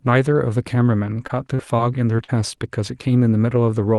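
Short concealed packet loss occurs five times: at 1.27–1.31, 1.55–1.61, 1.77–1.80, 2.16–2.20 and 2.24–2.30 s. Gaps of 20 to 40 ms were bridged by extending the preceding sound, heard as brief smears or wobbles rather than the silent holes or clicks of an unconcealed dropout.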